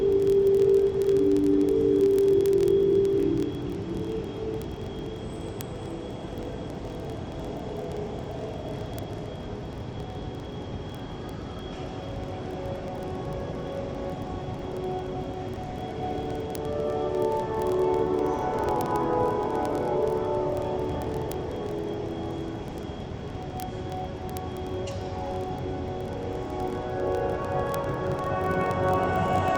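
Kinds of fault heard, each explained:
Word clock ticks: The receiving device runs on its own clock, not locked to the sender's. The clocks disagree by roughly a thousand parts per million. Each slip drops or repeats one sample. Sharp ticks follow about every 30 ms, from 0.1 s to 29.56 s.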